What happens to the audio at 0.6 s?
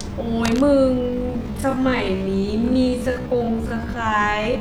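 Cable scratch noise runs from 0.44 to 0.61 s, ending right around that moment. A worn cable or connector being moved likely caused it, with contact resistance flickering rapidly. The result is a dense, uneven scratching rustle laid over the speech, roughly 10 dB below it.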